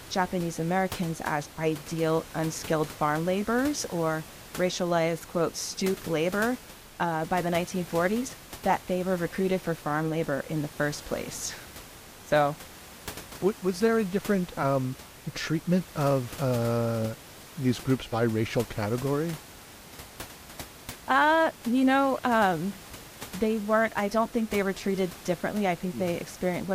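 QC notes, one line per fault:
No faults found in this speech recording.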